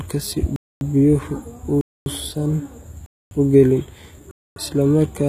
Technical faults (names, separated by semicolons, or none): HE-AAC compression; gap between chunks